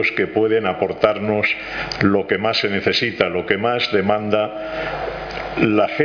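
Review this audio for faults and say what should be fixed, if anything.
No audible faults; nothing needs fixing.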